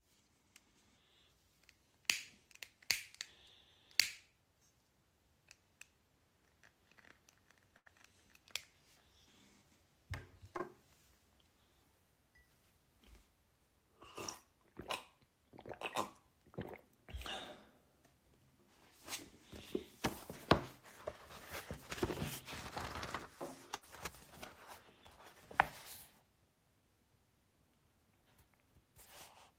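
A recording of everyday sounds with three dropouts from network loss. The first kind is a burst of packet loss, at 7.77 to 7.88 s and again at 23.75 to 23.84 s. Each time, about 80 ms of audio never arrived. The receiver stretched the last sound and faded it, for 83 ms and then 71 ms. Playback then jumps ahead past the missing part. The second kind is a short concealed packet loss at 10.58 to 10.61 s. About 20 ms failed to reach the decoder in time. A 16 ms extension of the preceding sound filled the hole and blended back in, leaving a brief smear.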